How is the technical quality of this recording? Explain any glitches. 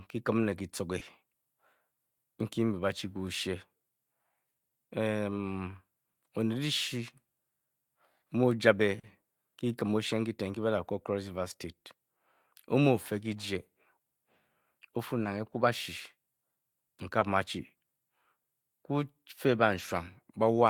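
The recording has four brief glitches from short concealed packet loss, at 0.99, 8.99, 15.23 and 17.19 s. About 20 ms of speech failed to arrive each time, 40 ms at 8.99 s. The receiver extended the preceding sound to fill each gap, then blended back. Each is heard as a tiny smear or wobble.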